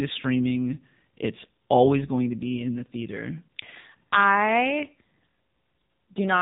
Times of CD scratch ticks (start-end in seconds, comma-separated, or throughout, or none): none